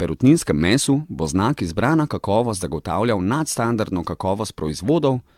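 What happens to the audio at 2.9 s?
At 2.9 s the speech sounds swirly, hollow and smeared, with blurred attacks, as it does throughout. That's likely generation loss: roughly seven AAC passes at around 96 kbit/s, each piling up fresh quantisation noise and spectral holes.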